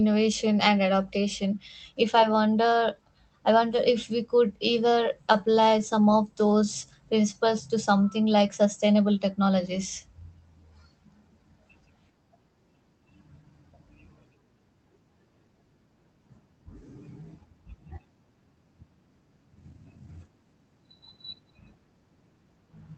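A speech recording carried over a WebRTC call path, its top end rolling off near 8 kHz as the Opus codec band-limits it. Scattered short gaps run from 4.95 s to 6.05 s, starting just after "if we could". About seven lost or late packets, each no longer than roughly 15 ms and totalling around 50 ms, were patched by extending the preceding sound. The result is a handful of brief ticks and momentary smears, with only about 5 percent of that stretch concealed and the speech clear between them. A jitter buffer slow-down follows from 6.52 s to 6.87 s. The receiver, short on buffered audio or raising its target delay, repeated individual pitch periods to rebuild its reserve, adding 38 ms. Playback there runs at 92 percent speed with unchanged pitch, so the sounds come out slightly drawn out.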